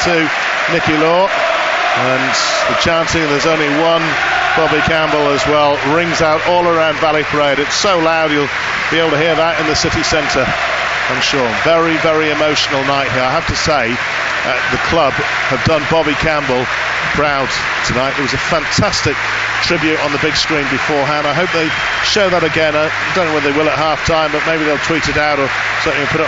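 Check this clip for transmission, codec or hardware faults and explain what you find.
No transmission, codec or hardware faults are audible anywhere in the clip.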